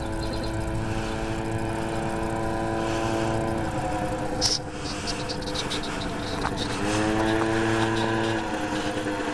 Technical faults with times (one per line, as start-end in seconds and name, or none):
0.30-0.51 repeated frames